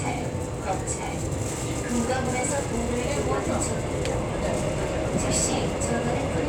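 From 3.24 s to the end of the clip there is a crude rate conversion. The audio was resampled by interpolating straight lines between neighbouring samples rather than filtering properly, and the pattern of the error points to a 44.1 kHz to 48 kHz change. The leftover error sits roughly 30 dB below the signal and forms shifted, inharmonic copies of the sound itself, heard as a gritty, inharmonic fizz riding on loud and bright moments. Unlike hiss or codec smearing, it follows the signal's level and pitch content.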